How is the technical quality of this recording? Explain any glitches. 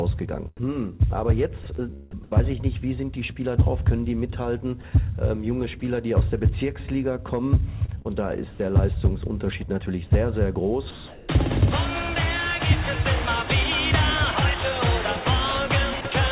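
The recording is band-limited, with nothing above 4 kHz, which fits a G.711 mu-law call path at 64 kbps. It also has repeated voice-detector dropouts and comfort-noise fill.

At 0.57–0.59 s, 5.80–5.82 s and 16.01–16.05 s, there is sound dropped by the voice detector. Each is a brief gap of 20 to 40 ms filled with flat noise, likely because the detector misjudged quiet sound as background.

From 1.64 to 2.20 s and from 7.86 to 8.59 s, the sound is chopped by the voice detector. Repeated switching, likely detector toggling, swaps about 83 ms and 132 ms of sound for synthetic noise, so the audio sounds choppy.

From 10.91 to 11.29 s, comfort noise replaces the background. For 380 ms, a steady, featureless hiss, about 21 dB below the loud passages and about 1 dB off the real background level, stands in for the actual ambience, likely during discontinuous transmission.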